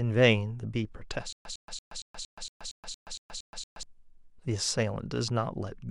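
From 1.33 s to 3.83 s the speech breaks into a stutter with silent gaps: a fragment of about 105 ms plays, then about 126 ms of digital silence, and the same fragment returns, eleven times at an even 231 ms period. The likely cause is a stalled player or stream that replays its last buffered chunk on each retry and then runs dry. The speech that belonged in that stretch is missing.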